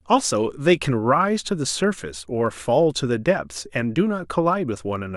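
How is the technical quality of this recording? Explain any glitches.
Clock slip clicks run through nearly the whole clip, from 0.11 s to 5.16 s. A faint, regular tick repeats roughly every 30 ms, about two hundred times, so it merges into a soft rattle riding on the speech and is most noticeable on louder passages. The likely cause is two devices on unsynchronised clocks, drifting apart by something like 700 ppm, so that a single sample is dropped or repeated at each slip.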